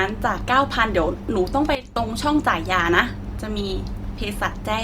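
A speech recording in which the level abruptly drops at 1.75 s and stays low until it snaps back at 1.96 s. For that fifth of a second both the voice and the background noise fall together by about 12 dB, with no fade in or out at either edge. That step-like behaviour is a sudden gain jump. The likely cause is a digital gain setting, or a bit shift, being changed from one sample to the next without any ramp.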